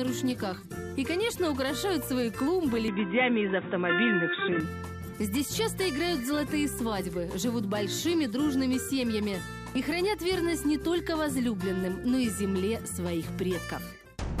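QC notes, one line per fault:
2.88–4.60 s, input switched to a poorer device: abruptly dull and boxy, nothing above 3.8 kHz, level shifts around 5 dB, faint new background noise; likely a narrower-band microphone taking over.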